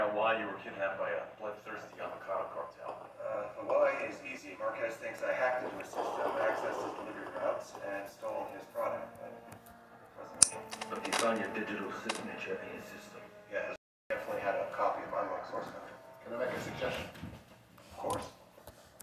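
There are no technical faults to describe at any point in this audio.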